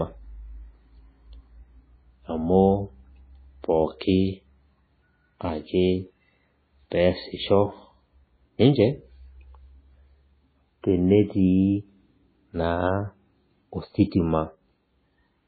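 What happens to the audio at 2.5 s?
MP3 compression damage is present at 2.5 s and across the whole clip. The speech has nothing above 4.5 kHz, and the heavy watery, swirling texture likely comes from an encoder starved at a very low bitrate, which fits about 16 kbps, cutting treble and dropping weak frequency lines.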